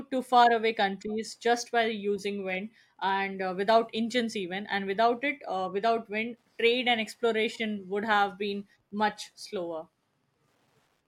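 From start to finish, the speech carries Wi-Fi interference: a faint, steady ticking repeating every 102.4 ms, just under ten times a second. A nearby Wi-Fi radio's beacon transmissions are being picked up and rectified by the audio circuitry, turning each radio pulse into an audible click. The ticks sit roughly 50 dB below the speech. On a spectrogram they appear as evenly spaced thin vertical lines, and in a zoomed waveform as a regular train of small spikes.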